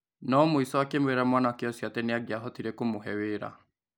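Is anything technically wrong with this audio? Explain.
No, no technical faults here.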